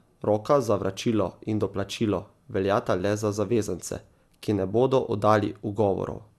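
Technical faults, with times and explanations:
Throughout, generation loss: the speech was likely decoded and re-encoded around seven times through a lossy codec, with a character that fits MP2 at about 128 kbit/s. Each pass re-quantises on a shifted frame grid, so coding noise accumulates. The result sounds swirly and hollow, consonant onsets are smeared rather than crisp, and nothing remains above 12.5 kHz, leaving the top end dull.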